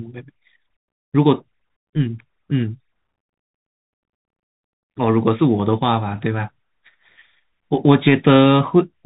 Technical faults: Bluetooth CVSD headset codec

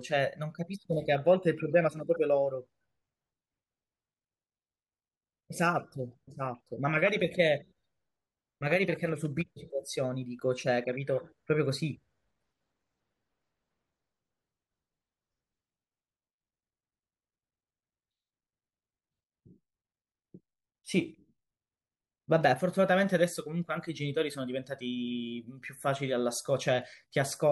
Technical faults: channel delay (comb filtering)

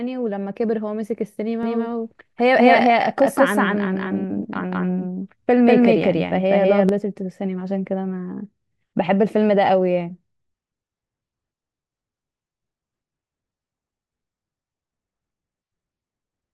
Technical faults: doubled audio track

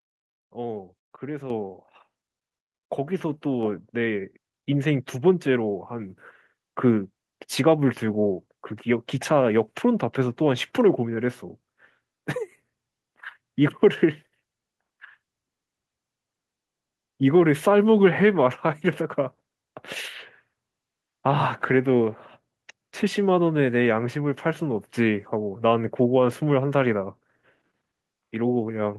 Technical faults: microphone volume stepped up

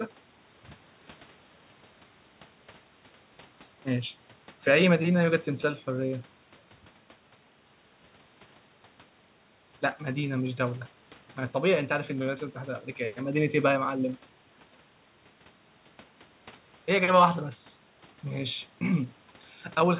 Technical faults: none

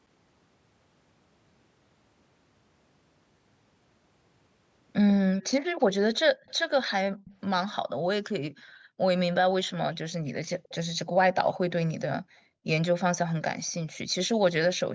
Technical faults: echo leak; background gated by the echo canceller

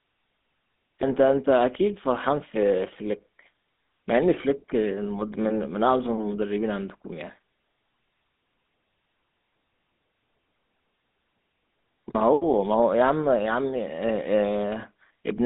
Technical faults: GSM full-rate codec

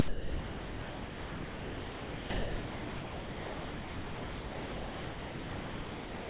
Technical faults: sound dropped by the voice detector

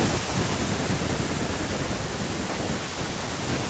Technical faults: automatic gain falling

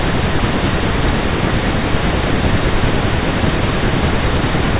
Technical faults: none

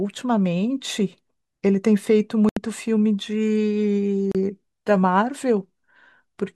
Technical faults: Bluetooth stall

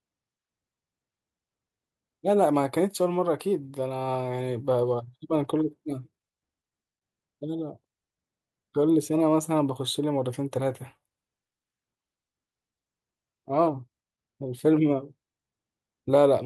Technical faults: none

